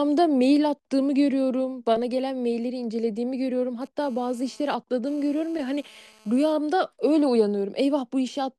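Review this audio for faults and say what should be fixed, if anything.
GSM phone buzz, 3.82 to 6.53 s: an intermittent, raspy 217 Hz buzz with dense harmonics, about 32 dB below the speech. A nearby 2G phone's data bursts were rectified by the audio circuitry. Keep phones off or well away from the recording chain.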